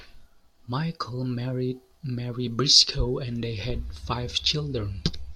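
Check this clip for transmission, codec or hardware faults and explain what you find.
No faults turn up anywhere in the speech recording. There is nothing to flag at any point in it.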